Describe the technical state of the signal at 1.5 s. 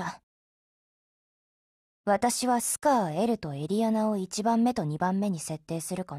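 At 1.5 s the signal is just coming out of a rebuffering stall that began at 0.42 s. The player exhausted its downloaded audio and halted, leaving about 1.08 s of silence, then resumes at 1.50 s exactly where it stopped, with no content lost.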